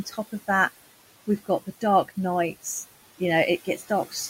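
Throughout the clip there are noise suppressor artifacts. The suppressor pushes the steady room noise, which sits about 16 dB below the speech, down by about 16 dB between phrases and lets it rise again under the speech, so the leftover noise pumps. On a spectrogram the noise floor looks patchy and blotchy rather than an even haze.

From 0.05 to 0.49 s there is speech cut by the noise suppressor. It mistakes quiet parts of the speech for noise and turns them down by up to about 11 dB, for roughly a tenth of a second in total, so those sounds come out swallowed. The same happens from 3.65 to 3.9 s, with a drop of about 13 dB. In the waveform these show as dips in the envelope, and on the spectrogram faint speech energy is blanked out along with the background.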